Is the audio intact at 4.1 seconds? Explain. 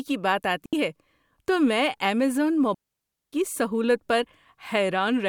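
Yes, the audio is intact at 4.1 seconds, with no audible fault at that moment.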